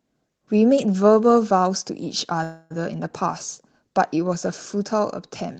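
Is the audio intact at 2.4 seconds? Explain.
No. From 2.43 to 2.72 s there is a call audio freeze, likely because packets stalled in transit and the jitter buffer ran dry. The last sound carries on as a fading buzz or hiss for 0.27 s, then the audio resumes where it stopped, nothing lost but delayed.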